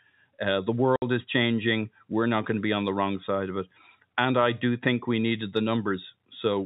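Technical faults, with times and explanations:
0.96–1.02 s, packet loss filled with silence: a 60 ms stretch of packets never arrived and silence replaced them, leaving a hard-edged hole just before "is changing".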